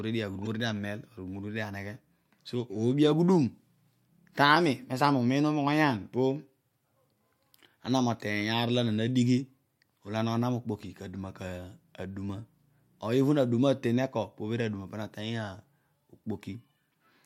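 Right near the start of the speech, from about 0.42 to 0.47 s, there's a short chirp, squawk, click or hole caused by damaged data in the compressed stream. Part of the data went bad, so the decoder misread those frames, lost sync and had to hunt for the next clean frame header.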